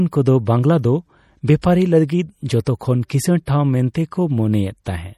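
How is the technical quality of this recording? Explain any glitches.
The recording carries plainly audible coding damage throughout, plus six brief pre-echo smears.

MP3 compression: the whole clip sounds watery and swirly, with metallic chirps on sibilants. This is likely lossy MP3 coding at a low bitrate, around 48 kbps, where the encoder starves weak frequency lines so they flicker on and off between frames.

Pre-echo: short hiss precedes attacks at 1.47 s (after "ᱵᱟᱝᱞᱟ ᱫᱚ"), 1.62, 2.07, 2.65 (just before "ᱠᱤᱥᱟᱹᱲ ᱴᱷᱟᱣ"), 3.46 and 3.94 s (after "ᱠᱤᱥᱟᱹᱲ ᱴᱷᱟᱣ"). Each lasts 12 to 20 ms. The codec spreads quantisation noise across its block, so noise meant for the loud onset leaks into the silence ahead of it.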